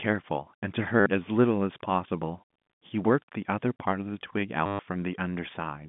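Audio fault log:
1.00 to 1.06 s, packet loss with last packet repeated: a 60 ms gap was covered by looping the last bit of audio that arrived. The short run comes across as a brief robotic stutter.
4.66 to 4.79 s, packet loss with last packet repeated: the same trick stretched over 130 ms gives a longer buzzy stutter. Its roughly 100 Hz repeat rate fits 10 ms packets, on a G.711 line with a 150 Hz to 3.6 kHz telephone band.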